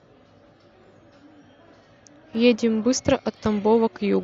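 At 0.49 s the speech has a single sharp click. A second click comes at 3.36 s. Each is instantaneous, a thin vertical line across the spectrum. The likely cause is dropped samples. A few samples, a tiny fraction of a millisecond, go missing from the stream. The waveform then leaps from one value straight to a later one. That step makes the click. Too little is lost to remove any audible sound.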